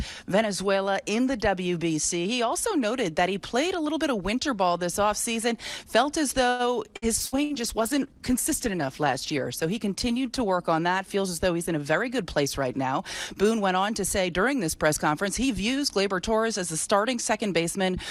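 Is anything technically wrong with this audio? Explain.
Yes, three overlapping faults fall in the middle of the clip.

From 6.49 to 7.53 s there is repeated packet loss, giving a robotic sound. Four holes open in quick succession, the longest about 97 ms. Each is patched by extending the preceding sound, so about a quarter of that stretch is synthetic fill, heard as choppy audio with pieces missing.

From 7.23 to 12.60 s a call bitrate drop takes hold. The encoder is forced to code far more coarsely, and the sound points to a fall from around 96 kbps to about 16 kbps, with the lowest rate lasting about 2.1 s. The audio turns rough and watery, and the missing high frequencies make it muffled until quality returns.

From 11.77 to 13.35 s a jitter buffer speed-up follows, as the receiver sheds excess buffered delay. It removes short pitch-period-length pieces repeatedly, about a tenth of a second in total, so the sound plays at roughly 106% speed at unchanged pitch and comes across as slightly hurried.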